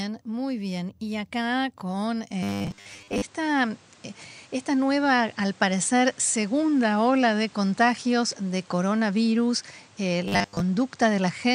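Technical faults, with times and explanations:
2.31 s to end, input switched to a poorer device: right after "acá con" the sound turns duller with no gap, shifting in level by about 5 dB and gaining a noise floor roughly 30 dB down, likely from a change to a narrower-band microphone.
2.43–3.22 s and 10.28–10.60 s, robotic sound from repeated short buffers: the first starts just after "acá con". Speech collapses into a rigid metallic buzz at 100 Hz, which fits a 10 ms chunk being replayed. Most of each span is repeats rather than new audio, likely because buffers arrived late.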